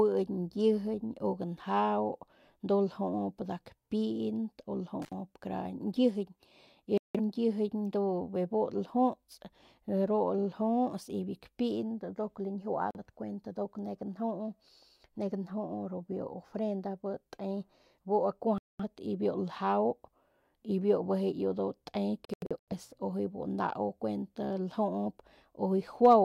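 At 5.02 to 5.13 s the speech breaks with an intermittent contact: a loose plug or cable opens for about 67 ms. The edges of the gap crackle and a faint hiss sits underneath. That ragged, noisy gap is what separates it from the clean digital mutes that follow.

Digital broadcast dropouts then cut the audio four times. The receiver stops getting usable frames and mutes until good ones return, so the missing speech is simply gone. The first, at 6.98 to 7.20 s, loses about 171 ms, which fits four frames of roughly 43 ms. A single-frame hole of about 43 ms comes at 12.91 s. About 213 ms drops out at 18.58 to 18.85 s. At 22.25 to 22.73 s the sound stutters through several short holes totalling 256 ms over 427 ms, the longest 85 ms. These are silent and free of crackle, and their lengths step in whole frames.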